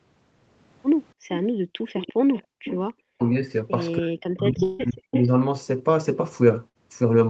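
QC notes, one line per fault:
1.14–1.93 s and 2.43–2.64 s, background gated by the echo canceller: the canceller clamped the microphone while the loudspeaker played, so room sound falls away by about 40 dB, then returns.
1.95–3.31 s and 5.11–5.26 s, echo leak: likely the far end's canceller passed residual loudspeaker pickup, heard as a copy delayed about 290 ms, roughly 10 dB below the speech.
3.13–3.23 s and 3.98–5.28 s, speech suppressed in double talk: likely the canceller mistook overlapping talk for echo, so the talker drops by roughly 40 dB.
4.63–4.81 s, long network dropout: likely a stretch of packets never arrived. The receiver extended the last sound for about 157 ms, and 160 ms of audio is skipped.
6.69–6.77 s, burst of packet loss: packets lost together removed 60 ms of audio. A fading held continuation about 57 ms long fills the gap, then audio resumes further on.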